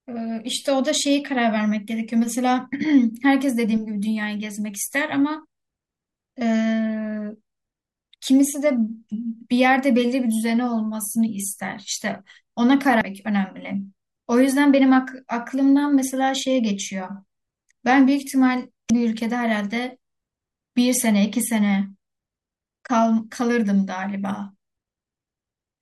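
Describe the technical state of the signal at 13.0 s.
At 13.01 s, compressed frames are skipped. About 300 ms of speech vanishes, fitting four missing 85.3 ms frames. The speech jumps straight ahead at the join.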